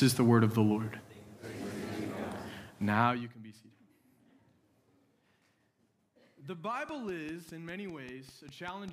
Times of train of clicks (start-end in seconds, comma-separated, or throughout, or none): 6.89-8.89